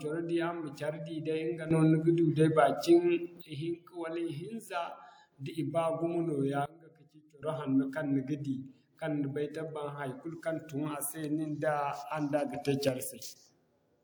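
Sudden gain jumps at 1.71–3.41 s (about +12 dB), 6.66–7.42 s (about −21 dB) and 12.54–12.89 s (about +6 dB). Speech and background noise step together instantly, unlike a fade's ramp, likely from gain applied without smoothing.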